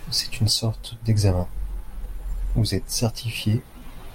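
No technical faults are audible.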